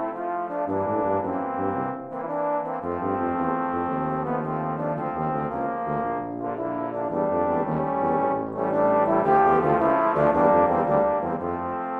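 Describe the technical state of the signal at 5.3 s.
No fault is audible at 5.3 s; the signal is intact at that moment.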